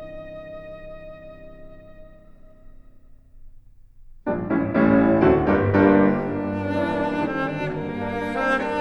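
No technical faults are audible anywhere in the recording.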